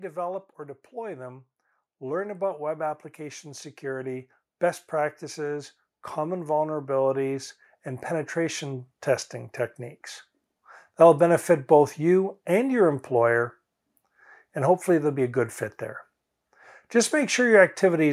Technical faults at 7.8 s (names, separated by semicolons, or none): automatic gain rising